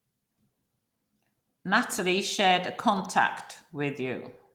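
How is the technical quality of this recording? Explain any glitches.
One glitch stands out: a single sharp snap at 3.05 s, just after "shared a". It is a brief, hard click that sits on top of the speech. It is likely an electrical switching spike, where a nearby switch or motor arcs and the audio line picks up the burst. The Opus voice compression at 20 kbps adds only light coding texture.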